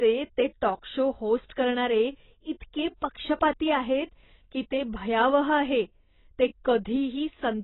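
Dull, boxed-in speech runs from start to finish, with nothing audible above about 3.9 kHz, so sibilants lose their edge and turn fizzy and smeared, while sustained vowels carry a watery warble. These are heavy artefacts of AAC compression, likely AAC-LC at a very low bitrate, which fits something near 16 kbps. Starved of bits, the encoder lowered its cut-off and coarsely quantised or dropped bands throughout, leaving spectral gaps that swirl over time.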